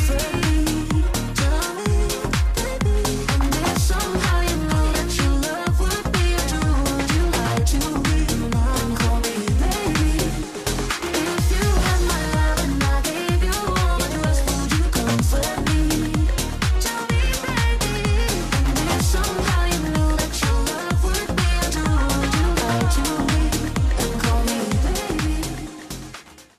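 No faults detected; nothing to flag.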